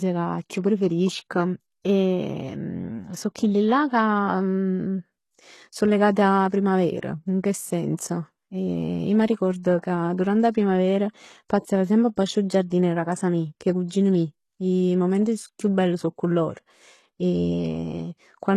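Across the whole clip the speech carries heavy damage of the kind that is likely from HE-AAC compression at a very low bitrate, consistent with about 16 kbps. The upper band is not the original signal but copied up from lower frequencies, so s sounds come out gritty and metallic, with harmonics that fail to continue cleanly into the treble. On a spectrogram the top region looks patchy and smeared, and nothing appears above 12.3 kHz.

From 6.49 to 6.52 s there is pre-echo. The codec spread its quantisation noise across a whole block, so hiss sized for a loud attack leaks into the quiet moment before it, here about 30 ms of it. The attack sounds softened. A second instance follows from 7.96 to 7.99 s, just after "in che", lasting about 29 ms. On a waveform each shows as a noisy ramp before the transient. A spectrogram shows a broadband smear leading into the onset.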